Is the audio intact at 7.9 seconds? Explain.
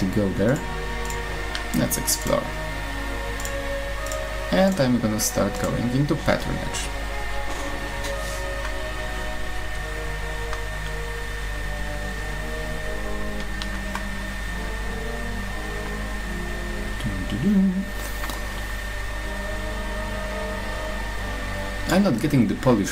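Yes, at 7.9 seconds the audio plays through cleanly, with no dropout, click, distortion or other fault to be heard at that point.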